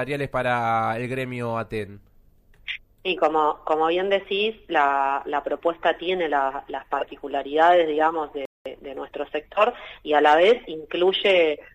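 A playback stall cuts the audio off mid-flow from 8.45 to 8.66 s, a gap of about 0.2 s, before it resumes. Likely the player ran short of data or its thread was blocked. On a waveform the trace drops to a flat line, and a spectrogram shows a clean vertical blank band.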